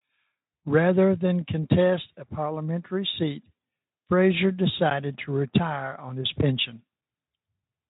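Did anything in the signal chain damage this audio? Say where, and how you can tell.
Yes. At 4.9 s the playback buffer ran dry for about 10 ms, an underrun with held sample at the driver or buffer stage. The converter froze on its last value, so the waveform sits flat, and the sound stops without a click. Nothing was skipped, since playback picks up where it left off, so the return into "to retire on his" is soft, heard as a brief hitch under Speex coding at about 18 kbps.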